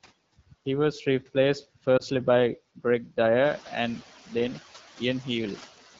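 This is a speech clip with two faults. Noise suppressor artifacts run throughout. The suppressor pulls down bands it judges to be steady noise, cutting the background by about 10 dB. The noise dips between phrases and swells back under the speech. There is also a lost AMR speech frame from 1.98 to 2.03 s, just after "was replaced". The brief dip or warble there fits a single 20 ms frame failing its check. The decoder filled the gap by repeating the previous pitch and vocal tract settings at reduced gain, and the speech returns weak or rough for a moment. The wideband codec's light coloration suggests an HD Voice rate around 12.65 kbit/s.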